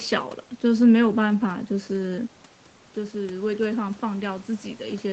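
Automatic gain rising from 2.94 s to the end of this speech clip: after the input dropped by about 9 dB, as when the talker moved around 2 s, the gain control slowly raised its gain, so voice and room noise swell together.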